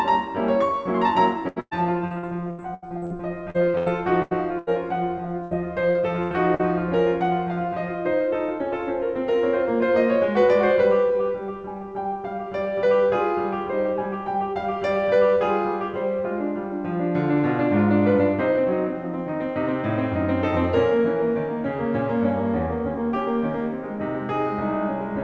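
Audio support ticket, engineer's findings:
Repeated packet loss (robotic sound), 1.48–3.13 s and 3.50–4.70 s: choppy music with pieces missing. Network/jitter buffer dropping packets over and over, with eight then five gaps, longest about 0.11 s. Decoder extends the last sound into each hole, so roughly 30% and 27% of the stretches are synthetic fill.

Burst of packet loss, 5.43–5.54 s, 6.23–6.34 s, 6.55–6.62 s: held, fading tone, then a jump ahead. Consecutive packets lost, roughly 40–80 ms each. Concealment sustains the last sound while attenuating, and the music between is missing.

Short concealed packet loss, 5.91–5.98 s: brief smear. About 40 ms never reached the decoder in time. Gap filled by continuing the preceding sound, then blended back into real audio. Band-limited G.722 call path, nothing above 8 kHz.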